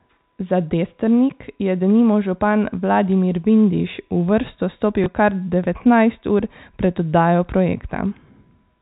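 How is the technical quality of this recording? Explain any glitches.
The recording has one brief glitch, heard against the narrow telephone band of the G.711 coding, which cuts everything above 4 kHz.

From 5.04 to 5.06 s there is packet loss with the last packet repeated. One 20 ms packet never arrived, so the receiver filled the gap by playing the previous 20 ms again. A copied chunk seldom lines up with the pitch cycle of speech, and the repeat sounds like a small blip. A dropout would leave silence instead, and this gap is filled with a repeat of the sound just before it. Because only one packet was lost, there is no sustained 50 Hz buzz.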